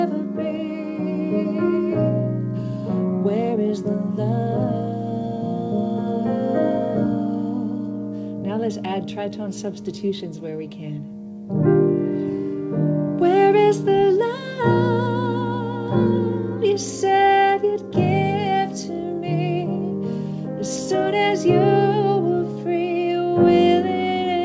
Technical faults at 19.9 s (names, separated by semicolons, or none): none